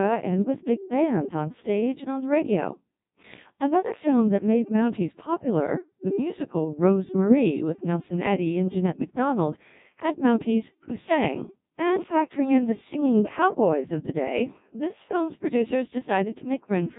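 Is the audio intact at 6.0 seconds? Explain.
No. At 6.0 s, as throughout, the speech passes through a Codec 2 vocoder, heavily damaged and fitting a rate near 1.2 kbit/s. Only pitch, voicing, energy and envelope survive, rebuilt from sine waves, so it sounds robotic and buzzy with nothing above 3.8 kHz, unlike mere muffling or band-limiting.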